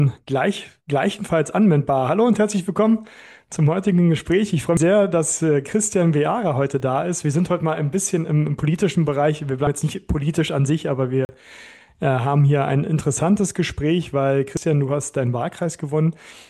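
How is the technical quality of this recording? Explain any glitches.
The recording has two kinds of glitch: three regular skips where audio goes missing between chunks, and two short blocks of digital silence.

Audio missing between chunks occurs at 4.77, 9.67 and 14.57 s. At each point about a tenth of a second of sound vanishes and the surrounding material is butted together with no gap, so the audio jumps forward abruptly. The even spacing is the telltale sign. It is likely caused by a recorder or processor handling the signal in 5-second chunks and dropping a slice at each changeover.

The blocks of digital silence are at 6.80 s, lasting 3 ms, and from 11.25 to 11.29 s, lasting 40 ms. In both, the signal drops straight to silence and returns with no fade, so each edge produces a sharp discontinuity. The 3 ms block is heard as a brief tick. The 40 ms block is long enough to register as a small hole. 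This points to the output buffer not being filled in time.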